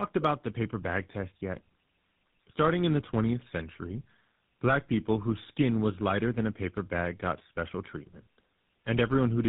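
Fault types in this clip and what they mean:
tandem speech coding: The call passed through GSM full rate coding twice, with a G.711 A-law link between, so the speech was decoded and re-encoded at each border. The second GSM coder worked on already degraded speech, leaving it rougher, more muffled and warblier, with nothing above 3.8 kHz.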